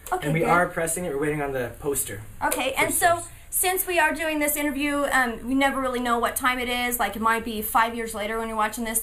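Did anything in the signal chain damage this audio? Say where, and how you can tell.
Yes: channel delay (comb filtering) runs throughout. One channel arrives a few samples late, roughly a tenth of a millisecond, at the driver or buffer stage, and the mono sum cancels evenly spaced frequencies from around 5 kHz upward. That gives a fixed, hollow, dulled top end.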